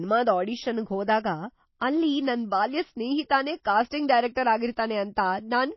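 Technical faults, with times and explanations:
Throughout, MP3 compression. The speech has nothing above 5.8 kHz, so it sounds dull and muffled. The codec damage is plainly audible as watery, swirling texture and metallic chirps on s sounds. The likely cause is a starved encoder, which fits about 24 kbps.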